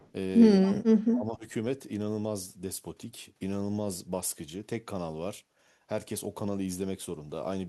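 Right at the start, from 0.00 to 0.08 s, there's a faint echo leak, a very quiet copy of the speech arriving 212 ms late, likely from a loudspeaker echo the far end's canceller missed. From 0.6 to 1.45 s the speech is suppressed in double talk, dipping and cutting in pieces by as much as 25 dB or so, likely because the canceller ducked everything while both sides talked. Inside that, at 0.65 to 0.70 s, a louder burst of the same 212 ms echo slips through.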